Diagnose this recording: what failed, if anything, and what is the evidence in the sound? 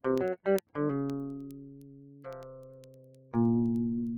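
A noise suppressor built for speech was left on across the whole clip, so this is a call-processing fault. It treats steady parts of the sound, ambience and decays as noise. Onsets pass, but held sound sinks behind them. The gain swings by around 20 dB. That constant riding makes the level pump and flutter, and the body of the sound thins out wherever nothing new is starting.

Word clock ticks run from 0.18 s to 4.17 s, at the converter or digital-link stage. They are sharp single-sample clicks, roughly ten per second, some forty in all. The receiving device is not locked to the sender's clock. The two clocks drift apart by a couple of hundred parts per million. Each time they slip past each other, one sample is dropped or repeated, leaving a tick.

The sound is cut by the noise suppressor in two spans, again in call processing. From 1.44 s to 2.25 s the level falls by up to about 9 dB. 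From 2.69 s to 3.33 s it falls by up to about 8 dB. In both spans the suppressor judged sustained sound to be noise. The steady and fading parts drop away and the decays are cut short, while the sudden onsets mostly survive.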